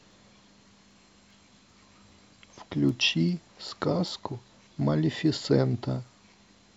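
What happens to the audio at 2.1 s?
At 2.1 s you're in the middle of a run of word clock ticks spanning 0.12 to 6.47 s. The receiver's clock isn't locked to the sender's, so about every 0.4 s a sample gets dropped or doubled. That gives roughly fifteen sharp, uneven ticks, which fits a clock mismatch of around 50 ppm.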